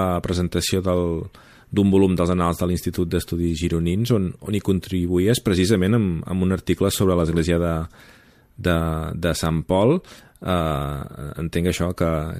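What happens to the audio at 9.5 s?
A single flipped bit at 9.46 s, a bit error spike, throws one sample to about −10 dBFS and straight back, heard as a sharp broadband tick.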